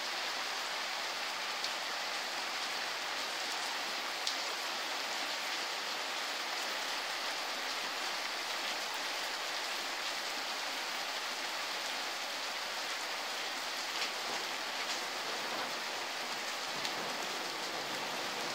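A corrupt frame decoded from 4.46 to 4.54 s: flipped bits in a few compressed frames were played back without being caught, so misread codes or gains put energy at the wrong frequencies, heard as a short chirp, squeak, blip or burst of noise in the sound.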